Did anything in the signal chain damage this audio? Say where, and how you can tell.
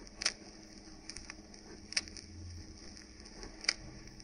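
Yes. At 2.86 s there is a DC step: the waveform's zero line jumps by about -47 dBFS in a single sample. That is heard as a brief low thump while the sound carries on unchanged. The offset then drains away rather than holding, consistent with a high-pass around 5 Hz downstream. This points to the converter or analogue input stage, such as an ADC recalibrating or an offset-carrying input being switched in.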